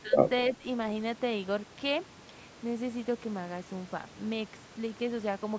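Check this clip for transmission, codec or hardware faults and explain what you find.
Two brief dips in the speech point to one fault, speech suppressed in double talk. The first runs from 0.02 to 0.16 s, the second from 0.57 to 0.64 s. In each, the level falls by about 10 dB, then recovers. The likely cause is an echo canceller that heard both sides at once. It could not tell this talker from the far-end echo, so it turned everything down. The call microphone processing passes nothing above 8 kHz.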